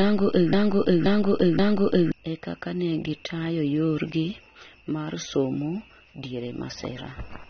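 From the very start to about 2.12 s, the same fragment of speech, roughly 0.53 s long, repeats exactly and back to back, with no gap at the joins. It is already under way when the clip begins and comes round three times. This broken-record loop likely means the player, encoder or stream stalled and kept resending the last piece it held, so the speech that belonged in those two seconds is gone.

Across the whole clip the speech sounds dull and smeared, with nothing above 6.3 kHz, and the compression damage is plainly audible as a warbling, fizzy texture on sibilants and held sounds. This is likely AAC compression, probably AAC-LC at a low rate that fits around 24 kbps. At that rate the encoder lowered its cut-off and quantised the frequency lines so coarsely that holes or substitute noise appear in the spectrum.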